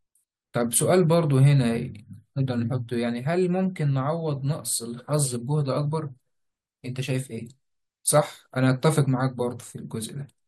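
A gap between stream segments interrupts this speech clip at 4.77 s. The timestamps of two consecutive pieces of the stream, which fits segments about 6 seconds long, fail to meet, leaving roughly 3.2 ms with nothing scheduled, and the player fills that hole with silence. The result is a brief, hard-edged dropout in the speech. Nothing is actually lost; the audio after the gap simply arrives fractionally later.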